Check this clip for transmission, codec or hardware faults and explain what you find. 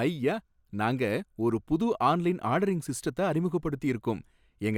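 No faults detected here.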